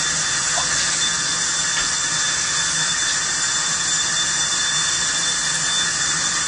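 A recording of sounds, audibly damaged throughout by what is likely AAC compression at a low bitrate, around 32 kbps. Nothing survives above 9.6 kHz, but unlike a simple low-pass filter, the remaining band warbles and fizzes where quantisation has left spectral holes.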